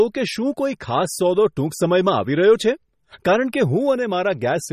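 The encoder was likely starved of bits by MP3 compression at a low rate, consistent with about 32 kbps, so treble is cut off above 14.5 kHz and weak frequency lines flicker between frames. Throughout, the speech sounds plainly watery and swirly, with smeared attacks.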